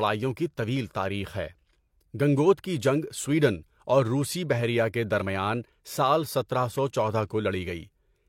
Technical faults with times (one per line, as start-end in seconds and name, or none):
none